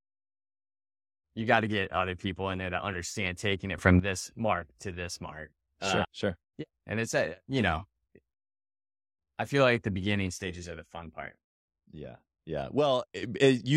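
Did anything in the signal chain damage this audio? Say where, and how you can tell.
Yes, a sudden gain jump: level and noise floor step together instantly, not ramped like a compressor, up about 14 dB at 3.78–4.00 s and down about 6 dB at 11.28–13.23 s. The likely cause is an unramped digital gain change.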